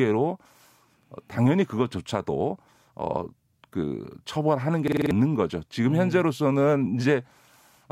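From 4.88 to 5.11 s the speech locks into a system hang loop: one 46 ms slice, consistent with a 2048-sample buffer, repeats exactly five times at 21.5 Hz, a rattling stutter. Unlike a dropout, the identical repeats replace about a fifth of a second of speech.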